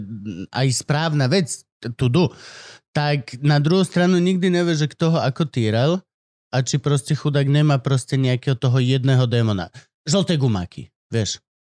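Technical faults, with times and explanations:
No technical faults can be heard, so there are no times or explanations to give.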